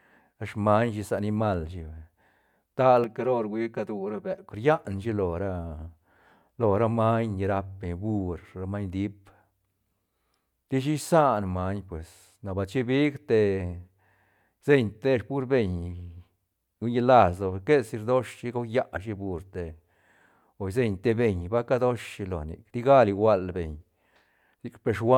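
From 3.04 s to 4.49 s the speech turns hollow and phasey, the signature of channel delay (comb filtering). One channel arrives late by roughly 5 ms, and when the two are summed to mono, the shared content cancels at a regular series of frequencies. With that offset the first notch falls near 100 Hz and further notches repeat evenly up the spectrum, thinning the voice's body and giving it a fixed, dull colouration for that stretch.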